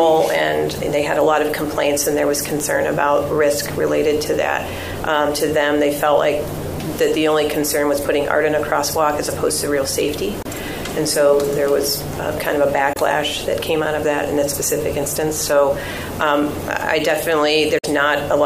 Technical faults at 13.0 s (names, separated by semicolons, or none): Bluetooth dropout